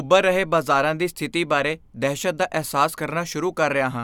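No technical faults are audible anywhere in the speech recording.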